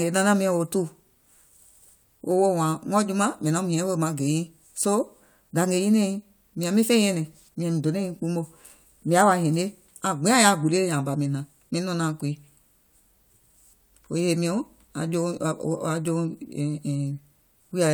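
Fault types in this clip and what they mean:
Nothing stood out on listening to this speech recording.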